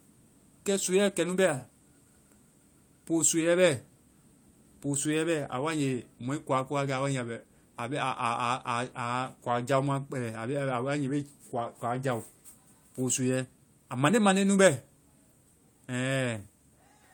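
Nothing is technically wrong with this speech recording.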